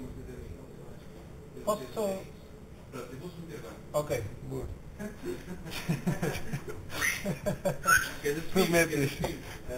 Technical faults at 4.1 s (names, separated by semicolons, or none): imaging from sample-and-hold upsampling